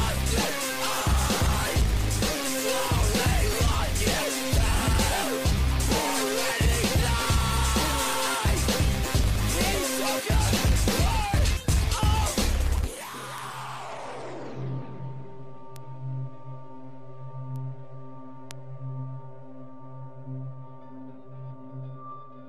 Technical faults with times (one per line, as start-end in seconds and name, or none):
13.38 bit error spike
15.76 bit error spike
17.56 bit error spike
18.51 bit error spike